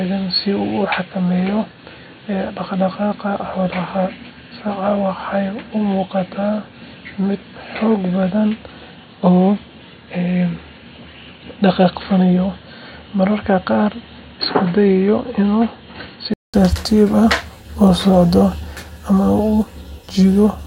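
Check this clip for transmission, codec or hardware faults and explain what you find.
One fault is present: the speech from the start to 16.54 s sounds as if the input switched to a poorer device. Through that stretch nothing reaches above 4.4 kHz, so the speech is dull and boxy. It is about 5 dB quieter and carries a noise floor roughly 30 dB down. The likely cause is a narrowband microphone or headset call profile. At 16.54 s a 200 ms gap precedes the full-band sound returning. On a spectrogram, energy stops flat at 4.4 kHz until that gap. On the waveform, a lower envelope precedes the brief flat line.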